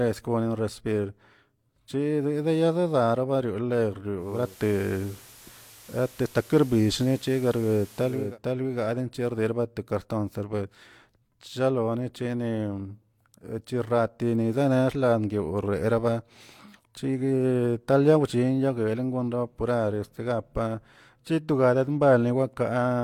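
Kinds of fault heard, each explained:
Digital radio blending to analogue: the receiver cross-fades over 418 ms to FM, adding hiss roughly 30 dB down, level shifting about 4 dB.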